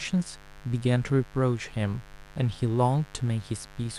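From the first moment to the last, there's a mains buzz under the speech, sitting roughly 25 dB below it. It's the raspy kind rather than a pure hum: something like a dimmer, a rectifier or a gap in the shielding is letting sharp spikes through twice per 50 Hz cycle, so the harmonics stack up well into the kilohertz range. You hear it as a steady, gritty buzz that never lets up.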